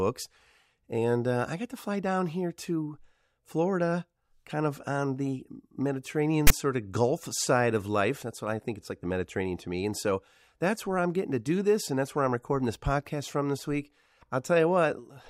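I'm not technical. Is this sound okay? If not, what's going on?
No. At 6.47 to 6.50 s there's a harsh rasp with hard edges: file tags played as audio, where the file's text labels got read as sound.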